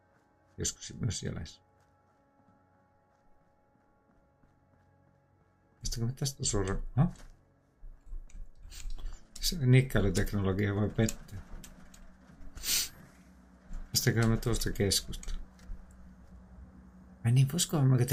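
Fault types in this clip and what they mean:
Nothing stood out on listening to the clip.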